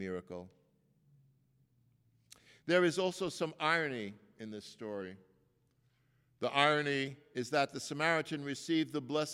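Speech clip with two drift correction steps. From 0.31 to 1.18 s the audio runs about 6% fast and sits roughly a semitone sharp, then snaps back. After "some irony in this", from 5.01 to 7.08 s, it runs about 6% slow and drops roughly a semitone flat until "is that the". Speed and pitch move together each time. The likely cause is clock-matching software resampling in one step to refill or drain its buffer.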